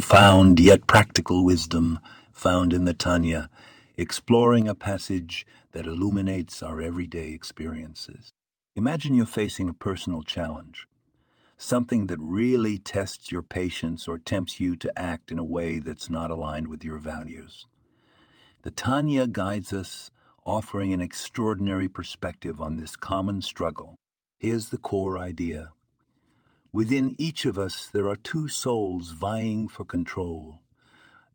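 At 1.17 s, just before "wisdom found in the", and again at 4.62 s, before "a passage that illuminates", the speech and background drop abruptly, by about 6 dB and then about 4 dB. This is a microphone volume stepped down, likely by call software automatically lowering the input gain.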